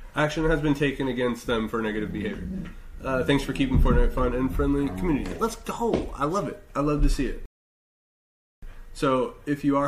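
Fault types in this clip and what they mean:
Rebuffering stall: the player used up the audio it had already downloaded and had to halt playback until more data arrived over the connection. In the sound this is a sudden drop into silence at about 7.46 s that holds until 8.63 s. Playback then picks up exactly where it broke off, with nothing skipped or repeated. The only effect is that roughly 1.17 s of dead air is inserted into the timeline.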